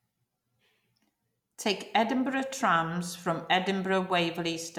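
Speech recording with no audible technical faults anywhere in the clip.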